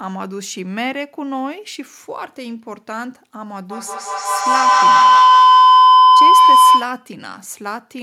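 From 3.7 s to 7.15 s there's a feedback howl: a mic and speaker are looping into each other, gaining level each pass until a tone near 1 kHz takes over, pulsing about every 150 ms and peaking about 15 dB above the speech.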